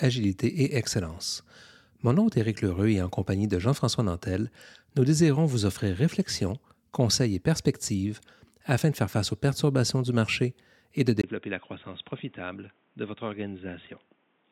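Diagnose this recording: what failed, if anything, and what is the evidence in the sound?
Driver stage: at 11.22 s, after a 20 ms gap, everything above 3.8 kHz disappears and the level drops about 10 dB, with new background noise. This is likely an input switched to a poorer device.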